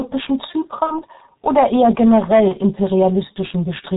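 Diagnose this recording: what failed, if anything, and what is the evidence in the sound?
The codec stage is at fault throughout: the speech is muffled and hoarse with smeared consonants, typical of G.723.1, with a sound that fits its low 6.3 kbit/s mode. A spectrogram would show nothing above 4 kHz and coarse, slowly changing formant bands.

The network stage caused VoIP packet loss concealed by the speech codec, at 0.83–1.03 s just before "oder eher" and at 2.48–2.54 s just after "oder eher". Each gap fits one lost 30 ms frame. The decoder repeated its last pitch and filter with falling gain, giving a brief, fading sound. On the waveform this appears as a decaying stretch, and the first event stays weak well beyond 30 ms.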